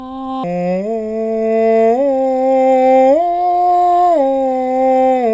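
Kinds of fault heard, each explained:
Wrong sample rate: from 0.44 s the music plays at two-thirds speed, dropping about 7 semitones; a spectrogram shows every harmonic compressed downward, events stretched wider.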